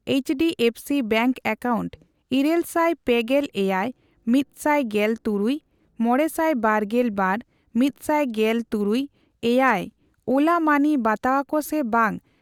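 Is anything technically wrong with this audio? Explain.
No, nothing technically wrong can be heard here.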